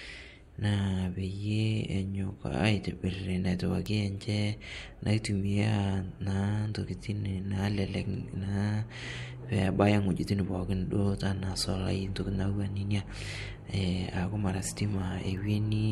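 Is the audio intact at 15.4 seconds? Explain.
No, a bit error spike at 15.37 s: one flipped bit throws a single sample off by a power of two, reaching about -37 dBFS, heard as a sharp broadband tick.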